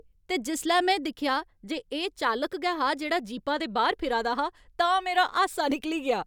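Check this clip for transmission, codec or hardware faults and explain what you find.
No transmission, codec or hardware faults are audible in this speech recording.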